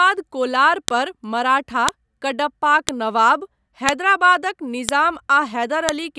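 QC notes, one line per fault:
0.88, 1.89, 2.89, 3.89, 4.89 and 5.89 s: file header played as audio. A sharp snap lands every second, first just before "पर मराठा कडप्पाक", next right after "कोलार पर मराठा". Each one-second piece kept its WAV header, and those bytes play back as a loud click.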